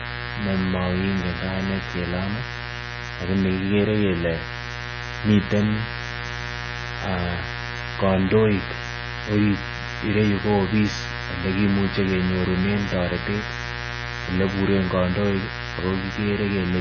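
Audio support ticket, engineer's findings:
Mains buzz, whole clip. Steady raspy buzz on a 60 Hz fundamental, harmonics climbing well up the spectrum, strong, only about 10 dB under the speech. Suspect dimmer, rectifier or broken shield injecting switching spikes twice per cycle. Distinct from plain hum: edgy and bright rather than a smooth low tone, and it never tracks the speech level.

Treble loss and watery, swirling texture, whole clip. Nothing above 6.5 kHz, s sounds dull with metallic chirps, consonant attacks smeared. Likely MP3 compression at a very low bitrate, which fits roughly 16 kbps: encoder fixing a treble cutoff and dropping weak frequency lines frame by frame. Unlike a simple low-pass filter, the remaining band also warbles and flickers.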